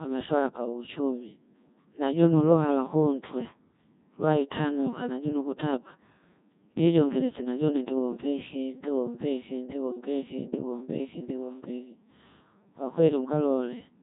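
Codec 2 vocoder damage runs throughout: the speech is rebuilt from sine waves using only pitch, voicing, energy and envelope, sounding robotic and buzzy, with heavy artefacts fitting a 1.6 kbit/s mode and nothing above 3.8 kHz.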